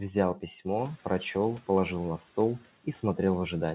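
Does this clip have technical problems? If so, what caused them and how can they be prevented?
Yes. From 0.77 to 0.99 s the noise suppressor is catching up. A sudden jump in room noise slips through until its estimate adapts over 220 ms, then the noise sinks by about 6 dB. A suppressor with faster noise tracking, or no noisy gear switching on mid-call, would prevent it.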